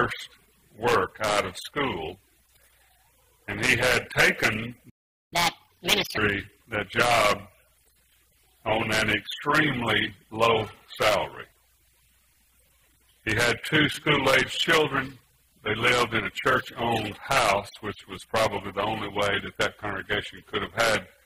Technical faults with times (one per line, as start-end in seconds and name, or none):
4.89-5.33 playback stall
5.33-6.17 catch-up at higher speed